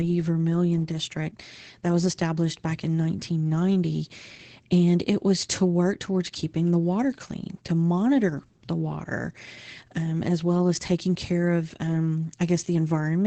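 Opus voice compression runs from start to finish. The speech is coded with the SILK predictor, and the band stops around 8 kHz. The excitation is quantised coarsely, which fits a rate near 12 kbps. The result sounds muffled, hoarse and faintly robotic.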